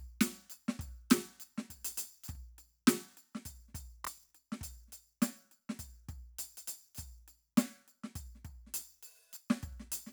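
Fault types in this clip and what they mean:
Processor overload crackle, 4.05 to 4.31 s: successive missed deadlines on buffers of around 10 ms repeat stale audio in hard-edged fragments, heard as gritty crackle.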